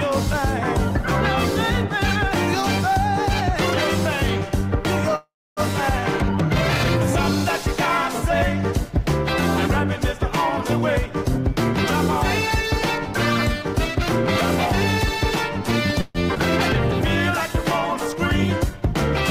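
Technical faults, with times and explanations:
5.15–5.60 s and 16.01–16.18 s, call audio freeze: the sound halts and its last moment carries on as a fading buzz or hiss, silent for 280 ms in the first. It likely comes from stalled packets emptying the jitter buffer. Playback resumes where it stopped, so 0.41 s and 0.14 s of delay are added and nothing is lost, unlike a dropout.
17.49–18.94 s, jitter buffer slow-down: the receiver repeats tiny stretches to rebuild its reserve, adding 45 ms, so the sound runs at 97% speed with drawn-out sounds at unchanged pitch. That is a gradual stretch, not a stop-and-resume gap.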